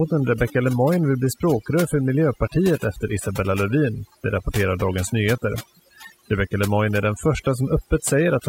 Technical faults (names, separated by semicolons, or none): overdone noise removal